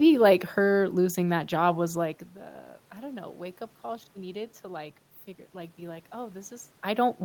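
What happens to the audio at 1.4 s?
At 1.4 s the speech plays through intact, with no dropout, distortion or other system fault at that point.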